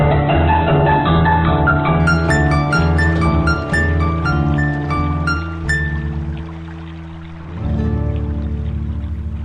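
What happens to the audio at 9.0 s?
Nothing goes wrong at 9.0 s; the audio plays through that moment intact.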